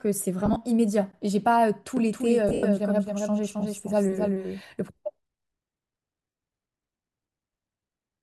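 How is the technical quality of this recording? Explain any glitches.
The recording has two kinds of glitch: dropouts from lost LE Audio frames in three places, and a stretch where the audio is doubled.

Lost LE Audio frames show up at 0.46 to 0.56 s, 2.49 to 2.63 s and 6.30 to 6.36 s. When the Bluetooth link drops frames, the LC3 decoder fills the gaps by reusing the last spectrum with scrambled signs, so the sound smears into a brief noisy blur. The first hit is about 50 ms of loss spread over 100 ms in short bursts. The second is the worst: about 120 ms lost over 140 ms, with one run of roughly a tenth of a second that starts to fade toward silence. The last is a solid 60 ms gap. The pattern fits 10 ms frames going missing.

The doubled audio track runs from 1.97 to 4.61 s. A second full-band copy of the speech trails the original by roughly 300 ms, at about 5 dB down. It's dry, with no reverb tail or room colour, and it switches in and out abruptly, so it sounds like a hard slapback rather than an acoustic echo. 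The likely cause is the same signal being captured twice, with one path running slower than the other. The second dropout cluster falls inside this doubled section.

There's also a trace of light lossy-codec texture, which is mild.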